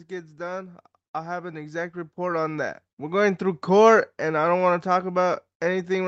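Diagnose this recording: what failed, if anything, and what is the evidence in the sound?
The fault is automatic gain rising in the call processing stage. From 0.36 s to 3.69 s the speech and background noise swell together by about 13 dB, as the AGC judged the input too quiet and ramped its gain. On a waveform, the envelope climbs steadily; a spectrogram brightens uniformly, noise floor included.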